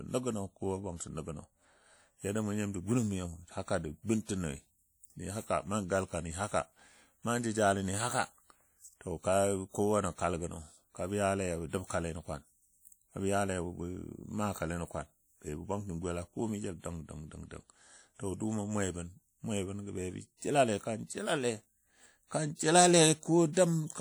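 Speech throughout carries plainly audible ringing, washy quantisation noise, with hiss breathing with the voice, likely WMA compression at a low rate that fits about 48 kbps. Pre-echo appears at 23.53–23.57 s: a short hiss spreads about 40 ms ahead of a sharp attack, smearing its onset as block noise fills the preceding quiet.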